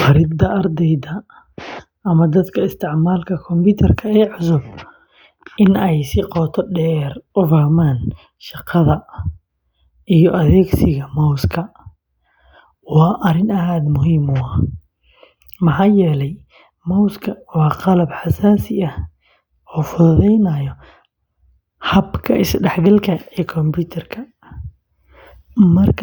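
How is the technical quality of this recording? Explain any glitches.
Nothing technical gets in the way here: the speech runs along without a single glitch worth pointing out.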